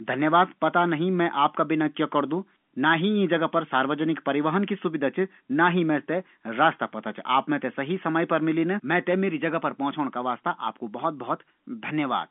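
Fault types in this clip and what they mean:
No faults can be heard in this speech recording.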